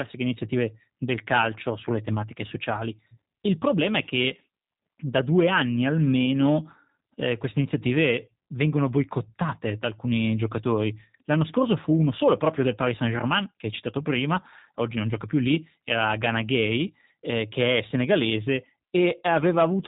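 G.729 codec damage runs through the whole clip, from the first second to the last. The speech has been rebuilt from a vocal tract filter, a pitch predictor and a few sparse pulses per frame rather than carried as a waveform, so it comes through plainly rough and synthetic. Everything above 3.8 kHz is gone, leaving a muffled telephone band. The sound points to G.729A at 8 kbit/s.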